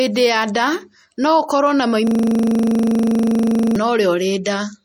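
MP3 compression runs through the whole of this speech recording, most likely at a low bitrate around 48 kbps. Nothing is present above 17.3 kHz, and the encoder's starved allocation lets weak frequency lines flicker in and out, giving a plainly audible watery, swirly texture. A system hang loop takes over from 2.07 to 3.76 s. While the computer stalled, the sound hardware kept replaying one 40 ms stretch of its buffer about forty times, so the audio turns into a rigid buzz-like stutter repeating at 25 Hz. Pre-echo appears from 4.44 to 4.46 s. The codec spread quantisation noise across a block containing a sharp attack, so about 21 ms of hiss arrives just before the onset and blunts it.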